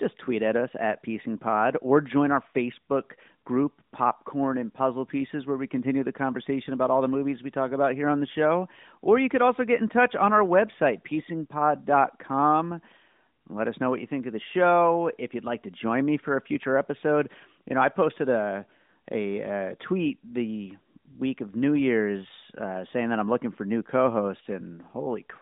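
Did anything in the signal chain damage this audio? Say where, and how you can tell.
No: nothing in the chain has damaged this speech, and the AMR narrowband mobile codec path is working as expected at 12.2 kbps, with a 150 Hz to 3.7 kHz line band, no content above 3.8 kHz, and only the light coding texture normal at that rate.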